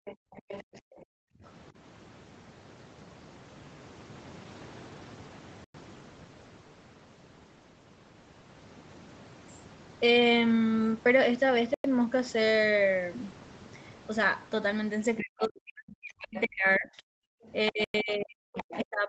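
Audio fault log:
0.00–0.82 s, speech suppressed in double talk: the talker dips by roughly 40 dB, in pieces over about 400 ms, likely the echo canceller ducking both sides during overlap.
0.06–1.51 s, other side's voice leaking through: a second voice sits underneath, roughly 15 dB below the talker, likely loudspeaker echo the canceller didn't fully remove.
1.10–1.43 s, background gated by the echo canceller: room sound drops by about 40 dB for around 300 ms while the loudspeaker plays, then comes straight back.
5.64, 11.74 and 17.84 s, gap between chunks: 100 ms silent holes every 6 s, chunk joins padded with silence, nothing lost but the flow breaks.
15.18–15.22 s, 16.37–17.48 s and 18.57–18.81 s, other side's voice leaking through: scraps of the far voice again, roughly 15 to 20 dB down, likely residual echo.
15.20 s to the end, speech suppressed in double talk: talker drops by roughly 40 dB in patches right through the overlap, likely the canceller turning both voices down.
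17.22–17.43 s, background gated by the echo canceller: another hard dip of about 40 dB in the room sound, around 200 ms, released once the loudspeaker quiets.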